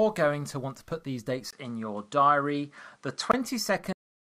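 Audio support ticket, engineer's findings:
Input switched to a poorer device, 1.51 to 3.34 s, right after "to put these dates". 20 ms gap at the switch. Band stops at 11.4 kHz. Level shifts around 5 dB, new noise floor roughly 40 dB down. Likely device or profile change.

Cut-off end at 3.93 s. Sound stops mid-utterance. Drops straight to digital silence, no decay. Final buffers never written or played out. Recording or playback path closed before flushing.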